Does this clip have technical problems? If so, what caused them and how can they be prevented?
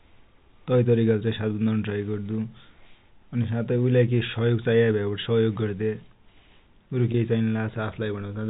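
Yes. Near the end of the speech, from 7.12 to 7.14 s, the sound briefly freezes into a held, slightly buzzy tone before continuing. This is packet loss with pitch repetition. About 20 ms of audio never arrived, which fits a single lost packet, and the receiver filled the hole by repeating the last pitch period rather than leaving silence. The G.711 telephone coding carrying the call sounds normal for its 4 kHz band limit. A jitter buffer with forward error correction on the network path would prevent such gaps.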